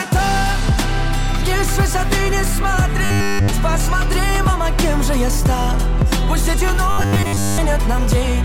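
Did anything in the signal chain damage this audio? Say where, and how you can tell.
Yes. Robotic sound from repeated short buffers appears at 3.05 to 3.50 s and 6.91 to 7.58 s: a rigid 100 Hz metallic buzz, throughout the first stretch and over most of the second. The likely cause is a starved driver or buffer stage replaying a 10 ms block.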